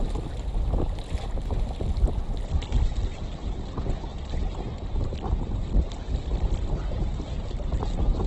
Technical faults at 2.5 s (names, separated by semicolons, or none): adaptive stream at a lower bitrate